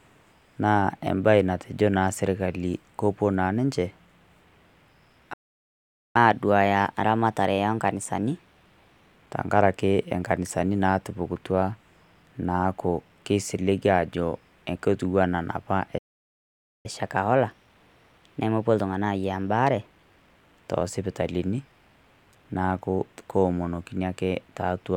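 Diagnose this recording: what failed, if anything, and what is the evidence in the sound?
Playback stall at 5.33–6.16 s and again at 15.98–16.86 s, right after "kotua naa napaa e". At the playback stage, the speech cuts out mid-flow into silence for about 0.82 s the first time and 0.86 s the second, then resumes where it stopped. The likely cause is the player's buffer running dry or its output thread being blocked, so nothing reached the converter until it recovered.

Catch-up at higher speed follows each stall, from 6.16 to 9.16 s (starting just before "tang'araki enkanisani natupukutua") and from 16.86 to 19.86 s. Also a playback-stage fault, the speech runs at 1.1 times normal speed for 3 s, raised in pitch by roughly a semitone and a half. The player resamples its backlog to win back the lost time, so tempo and pitch climb together.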